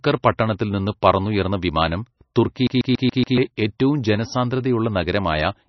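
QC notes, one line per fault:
Throughout: MP3 compression, likely from a low bitrate around 27 kbps; nothing above 5.9 kHz survives, leaving dull, watery speech with swirling, unstable detail.
2.67 to 3.38 s: CD stuck on one turn; a 141 ms slice repeats five times with brief mutes between jumps, giving a rapid, even stutter.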